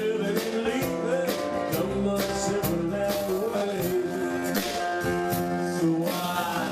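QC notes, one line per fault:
3.12–6.71 s, time-stretched section: from here to the end the pace suddenly drops to about 0.6x while pitch holds steady, so it drags. Likely software stretching the audio to fill a length by repeating short chunks.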